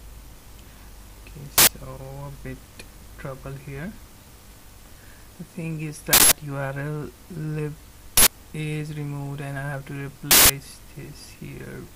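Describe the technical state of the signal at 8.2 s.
An uninitialised buffer plays from 8.17 to 8.27 s, a block of about 93 ms that fits a 4096-sample buffer. It was sent to the output before any audio was written, so stale memory contents are heard as a short burst of digital noise.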